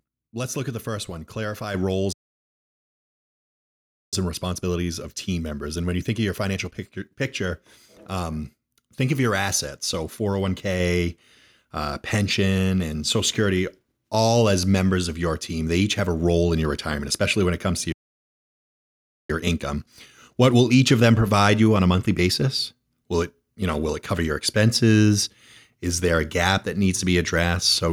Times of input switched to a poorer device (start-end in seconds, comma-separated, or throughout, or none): none